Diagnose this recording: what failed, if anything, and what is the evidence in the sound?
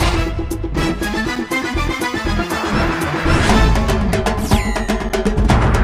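At 5.09 s the sound drops out for about 8.7 ms and returns abruptly, with no fade in or out. The gap is short enough to be heard as a tick or dip rather than an audible gap. This is a block of digital silence at the driver or buffer stage. The output buffer was most likely not filled in time, so a run of zero-valued samples was played in place of audio.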